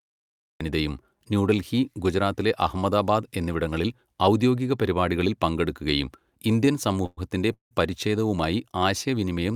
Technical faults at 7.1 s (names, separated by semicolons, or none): call audio freeze